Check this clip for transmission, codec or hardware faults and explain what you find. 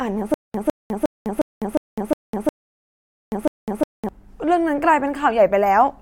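Two delivery faults are present, and they overlap in the first four seconds.

From 0.34 s to 4.09 s there is a stutter with silent gaps. A 0.16 s fragment of speech repeats eight times, each followed by 0.2 s of digital silence, on a steady 0.36 s cycle. The likely cause is a stalled stream replaying its last fragment at each retry. The speech due in that span is lost.

From 2.69 s to 3.32 s there is a rebuffering stall. The player ran out of downloaded audio and waited for more. The sound drops to silence, then resumes exactly where it stopped. Nothing is lost, but 0.63 s of dead time is added.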